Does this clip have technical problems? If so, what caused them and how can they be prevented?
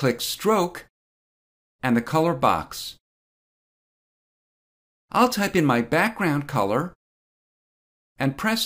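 Yes. Regular clicks recur about every 2.17 s from 1.74 s to 8.23 s, roughly four in all. These are clock drift buffer slips, likely from two devices on independent clocks differing by something like 150 ppm. Each slip drops or repeats a small block, perhaps around 15 samples. A spectrogram shows evenly spaced thin vertical broadband lines, and the waveform shows a small step or discontinuity at each one. To prevent this, lock both devices to a shared word clock, or use asynchronous sample-rate conversion between them.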